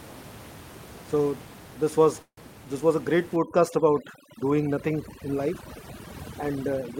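At 2.22 s the audio stalls until 2.39 s, just before "this was". This is a call audio freeze, likely from packets held up in transit until the jitter buffer ran dry. The last sound is stretched into a fading buzz or hiss, then about 70 ms of silence. The speech resumes intact, now running about 152 ms later.

From 3.36 s to the end, overdone noise removal takes hold. The room noise, about 16 dB below the speech, drops and breaks up into twinkling specks. Quiet parts of the voice are cut along with it.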